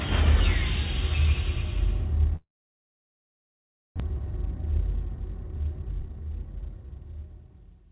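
At 2.36 s the sound breaks off and does not return until 4.02 s, most likely a long network dropout. The receiver briefly extends the last sound as a fading buzz or hiss, then leaves about 1.5 s of silence. About a second of audio is never played, and the resumed audio skips past it. The stall also builds up a backlog of roughly 0.7 s of delayed audio.

From 4.1 s to 7.5 s a jitter buffer speed-up drains that backlog. The receiver repeatedly cuts out short, pitch-period-length slices, removing around 0.7 s in total. The audio runs at about 117% speed with unchanged pitch, so this stretch sounds hurried.

Throughout, the audio has no content above 4 kHz, consistent with a G.711 mu-law call path at 64 kbps.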